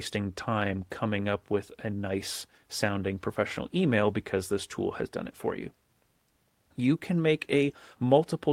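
At 0.69 to 0.83 s, just before "coming up with a", a lost packet rebuilt from error correction fills about 80 ms, and at 7.67 to 7.77 s, right after "can make", another covers about 60 ms. Each points to a short run of lost packets replaced by the low-bitrate copies carried in the following packets, so nothing drops out. The speech turns briefly rough and noisy. The waveform stays continuous, while the spectrogram shows a grainier, smeared patch with blurred harmonic detail.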